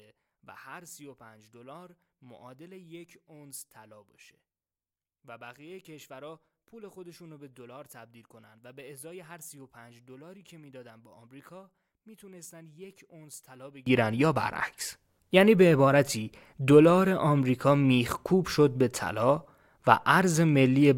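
One stereo channel likely had its polarity reversed from 0.0 to 13.86 s, a case of one channel inverted. Summed to mono, the centred speech cancels and drops by about 25 dB, leaving only a faint residue of the difference between channels.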